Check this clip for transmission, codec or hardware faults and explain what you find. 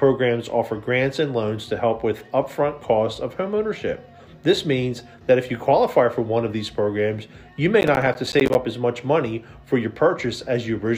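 One fault: processor overload crackle from 7.81 to 8.55 s. The processor repeatedly missed its buffer deadlines, and each miss left a short hard-edged silence, spaced in a way that fits buffers of roughly 10 ms. The run of gaps sounds like gritty crackle tearing through the audio until the load eases.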